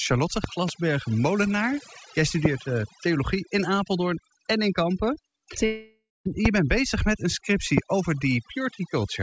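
Throughout the speech, overdone noise removal has pulled the background down and broken it into twinkling specks. A spectrogram shows speckled, isolated time-frequency dots and ragged gaps in the quieter harmonics, all cut off at 8 kHz by the call path.

Loud pops, likely static or plug transients, land as two pops at 0.44–0.71 s, then at 2.45–2.48 s before "eh theologie in", at 6.46–6.48 s before "bent bezig met een", and at 7.78–7.80 s after "bent bezig met een". They peak about 15–20 dB above the speech and show as sharp waveform spikes and full-height vertical spectrogram lines.

From 5.66 to 6.27 s a long network dropout, likely packet loss, removes about 0.6 s of speech. The last sound carries on as a fading buzz, then about 0.2 s of silence follows before the speech resumes further on. A spectrogram shows smeared, decaying bands and then a blank gap.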